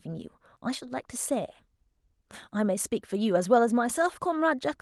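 No technical faults can be heard in this speech.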